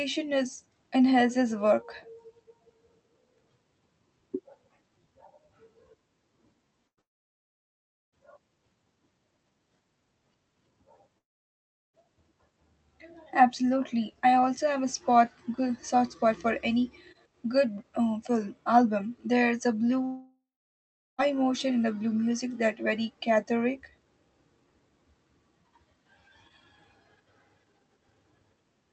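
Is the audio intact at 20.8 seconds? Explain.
No. At 20.8 s the audio sits inside a long network dropout running from about 20.05 to 21.20 s, just before "emotion in the blue" resumes. Packets likely stopped arriving, so the receiver stretched the last sound into a buzz or hiss that fades, then left about 0.76 s of near silence. On a spectrogram, smeared, repetitive bands fade into an empty gap. On the waveform, a decaying envelope flattens to almost nothing before speech returns abruptly.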